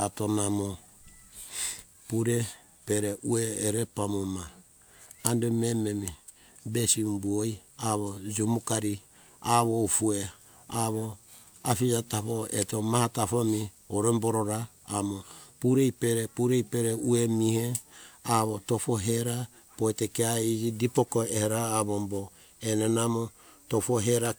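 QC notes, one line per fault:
No faults to note in this speech clip.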